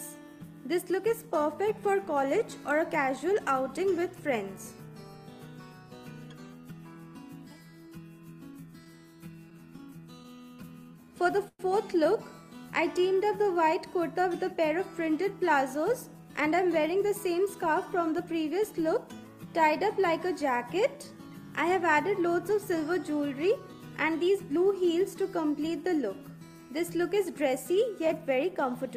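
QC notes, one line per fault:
8.71–10.73 s, repeated stalls (stutter). Sixteen short gaps, the longest about 12 ms, add 177 ms of filler with nothing lost. That is about 9% of the span. Packets kept arriving late, so the jitter buffer ran dry again and again. Each time, the receiver stretched the last sound briefly until data came back. The result is a dragging, stuttering stretch rather than dropouts.
10.78–11.10 s, 12.54–13.72 s and 20.52–21.31 s, jitter buffer slow-down. The receiver repeats single pitch periods and bits of pauses to rebuild its reserve. Playback drops to 86% speed in the first run and 92% in the other two. This adds 53 ms, 99 ms and 73 ms. Pitch stays put, so sounds are simply drawn out.
11.48–11.62 s, call audio freeze. The sound hangs as a fading continuation for 113 ms, ending in about 40 ms of silence. Then it resumes where it stopped, with nothing missing. The likely cause is packets held up in transit, which emptied the jitter buffer. 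Playback delay grows by 113 ms as a result.
15.51–18.25 s and 23.29–24.57 s, jitter buffer speed-up. Playback runs at 108% with unchanged pitch. The receiver trims short pitch-period slices, many in a row, to shed surplus buffered audio. Roughly 200 ms goes in the first run and roughly 100 ms in the second. Both passages sound hurried.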